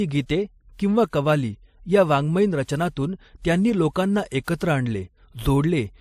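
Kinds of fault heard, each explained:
Transcoding between lossy codecs: the speech was likely encoded twice, first as MP3 and then again as WMA, so the second encoder spent bits re-coding the first one's damage while adding its own. Two layers of coding noise sit together, and nothing remains above 15 kHz. The chain fits an MP3 stage near 41 kbit/s, followed by WMA near 96 kbit/s.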